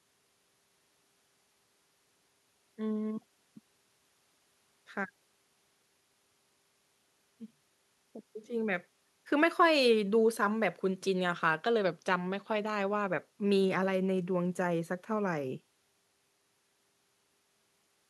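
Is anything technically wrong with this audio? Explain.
No, nothing is technically wrong with this audio.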